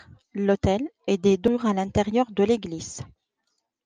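At 1.47 s there is a CD skip. The laser jumped to another turn of the disc spiral, so the speech ticks, mutes for about 3 ms, and resumes elsewhere.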